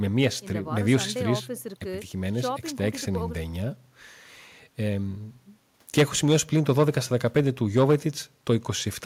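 No technical faults occur anywhere in the recording, so there is nothing to describe in time order.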